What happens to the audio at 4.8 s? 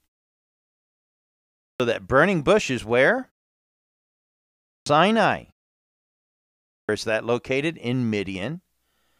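At 4.8 s you're inside a clipped start after a pause: after about 1.24 s of silence the output device had dozed off, and while it woke back up, roughly 390 ms of speech from 4.47 to 4.86 s got swallowed, so the next phrase just pops in already underway.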